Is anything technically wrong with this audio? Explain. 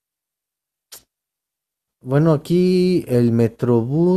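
No, nothing technically wrong stood out on listening to this speech recording.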